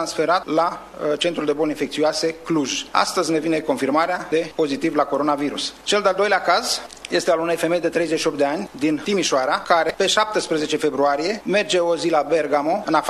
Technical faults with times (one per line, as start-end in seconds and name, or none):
0.74 damaged data in a compressed stream
9.89 damaged data in a compressed stream